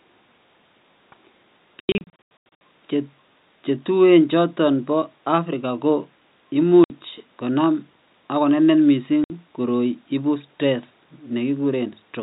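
From 1.8 to 2.61 s, packet loss filled with silence chops the speech with hard-edged holes totalling about half a second, the longest 90 ms. Single 60 ms gaps follow at 6.84 s, before "konam ak konenet", and at 9.24 s, before "koroi ibu stress". All gap lengths fit dropped 30 ms packets.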